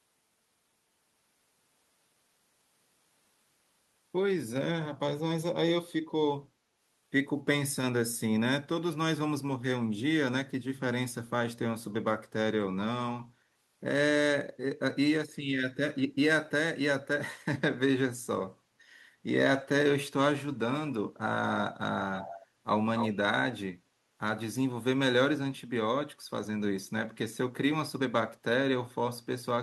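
Speech with an echo leak at 22.13 to 22.47 s and 22.97 to 23.17 s: a distinct copy returns 275 ms late, first faint, then nearly as loud, likely loudspeaker pickup the far end's canceller missed. Unlike room reverb, it is a separate repeat, not a smear.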